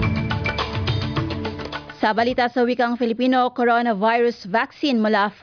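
Nothing technically wrong turns up anywhere in the audio.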